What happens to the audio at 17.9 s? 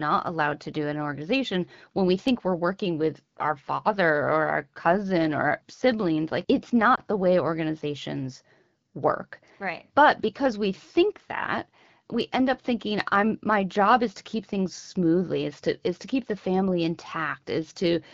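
Nothing goes wrong at 17.9 s: the speech there is intact, carried cleanly by the AMR wideband (HD Voice) codec at 12.65 kbit/s.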